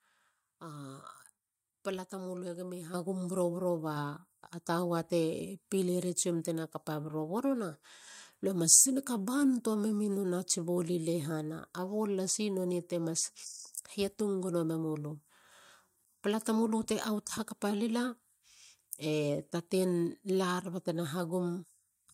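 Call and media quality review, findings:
Microphone volume stepped up at 2.94 s (about 8 dB) and again at 3.96 s (about 3 dB). Speech and background noise floor jump together, instantly. Component: call client's automatic mic gain, raising device input volume in discrete steps rather than ramping.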